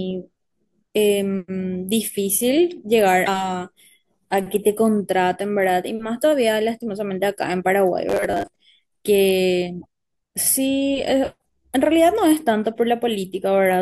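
A broken MP3 bit reservoir shows up first at 3.25 to 3.28 s. The sound jumps forward and the frames just after the gap come out as a chirp, a burst of noise or a short hole rather than clean speech. The likely cause is missing frames. The decoder then reads back into bytes belonging to other frames, and the 28 ms span fits roughly one 24 ms frame. The same fault returns at 9.81 to 9.86 s, about two frames long.

Robotic sound from repeated short buffers runs from 8.10 to 8.48 s. The speech turns into a stiff metallic buzz at 100 Hz, which points to a 10 ms chunk being played again and again. Roughly half of that stretch is repeated audio, with the real speech in between skipped. The likely cause is new audio arriving too slowly, so playback refills the gaps with the last buffer. The buzz still loosely tracks the speech.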